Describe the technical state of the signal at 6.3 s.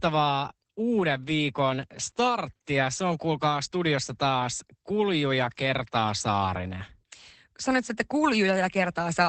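At 6.3 s, as throughout the clip, the speech has passed through Opus voice compression running its SILK linear-prediction coder in wideband mode. Starved of bits, the coder models the excitation coarsely, and the sound points to a bitrate around 12 kbps. The result is plainly audible: nothing remains above about 8.6 kHz, so the voice is muffled and dull, with a hoarse, faintly robotic texture where the fine detail was discarded.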